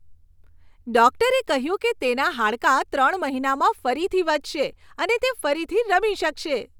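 Listening to this speech recording, nothing stood out as a technical problem.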